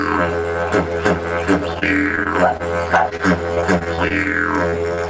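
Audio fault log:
1.74–2.62 s and 3.10–4.27 s: repeated packet loss (robotic sound). Packets kept arriving late or not at all, with gaps up to 25 ms. Each hole was patched by continuing the preceding sound before the next one struck, so the audio turns choppy, with fragments missing.
4.70–4.80 s and 4.95–4.99 s: short concealed packet loss. About 20 ms of audio failed to reach the decoder in time at each point. The receiver extended the last sound across the gap and blended back in, leaving a brief smear or wobble.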